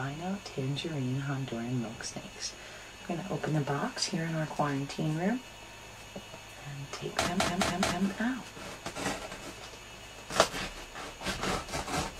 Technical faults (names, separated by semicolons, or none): repeated frames